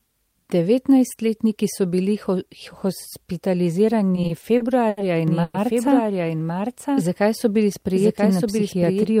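It's a speech clip with four separate problems. From 4.15 to 4.99 s there's a run of repeated stalls, a stutter. The sound hitches six times, adding about 170 ms of stretched-out filler in total, with the longest hold around 80 ms. That's roughly a fifth of that stretch. Nothing seems to be lost, but it drags and catches, which is what you get when packets keep arriving late and the jitter buffer runs dry over and over, so the receiver holds the last bit of sound each time. Starting at 5.28 s and running to 9.05 s, there's a doubled audio track: a second full-band copy of the speech trails the original by about a second, at about 5 dB down. It has no room sound or decay on it, and it starts abruptly, so it's likely the same audio being captured a second time through a slower path, or two out-of-step copies in an edit. At 5.43 s, inside that doubled stretch, there's a short call audio freeze lasting about 110 ms. 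The last sound gets held and smeared rather than dropping to silence, and then the speech carries on from where it stopped. That pushes everything after it later by the same amount, most likely because packets were held up in transit and the jitter buffer briefly emptied. Finally, from 8.58 to 8.84 s there's a jitter buffer speed-up. The speech runs at about 112% speed with the pitch unchanged and sounds a bit rushed. The receiver is trimming out tiny pitch-period slices, a few tens of milliseconds in all, to work off a backlog of audio that built up in the buffer.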